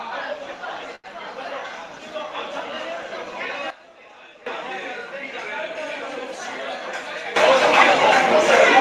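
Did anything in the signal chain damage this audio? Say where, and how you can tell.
Yes. At 0.95 s a short stall from a late packet stretches the sound. It holds for 84 ms, to 1.06 s, then resumes where it stopped. Nothing is lost. This is the network and jitter buffer stage: the buffer ran dry and filled the gap.

A sudden gain jump drops the level about 14 dB at 3.70 s, recovering at 4.46 s. Another raises it about 16 dB at 7.36 s, through the end. Sound and noise floor move together. The likely cause is an unramped digital gain step in call processing, above the band-limited Opus-style coding.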